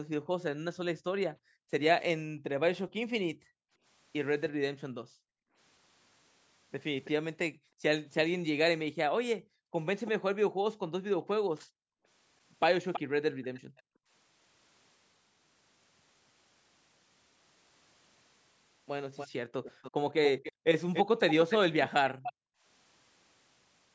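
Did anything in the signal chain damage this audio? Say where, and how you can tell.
Yes. Background gated by the echo canceller in call processing: between 0.21 and 14.11 s and 20.52 and 22.64 s, room sound briefly drops by up to about 40 dB.

Echo leak: a copy about 10 dB down trails the speech by 325 ms (7.04 to 13.82 s) and 287 ms (19.15 to 22.33 s), likely far-end loudspeaker pickup the canceller missed.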